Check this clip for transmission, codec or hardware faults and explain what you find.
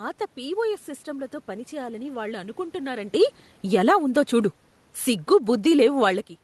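One fault stands out, in the gain rather than the codec or hardware. Automatic gain falling, 3.11 to 6.36 s: the gain control judged the input too loud, or its background noise too strong, and eased its gain down by about 6 dB, so the speech and the room noise behind it sink together. The call path is working normally, with coding noise and a top end near 12 kHz that fits Opus at around 24 kbps.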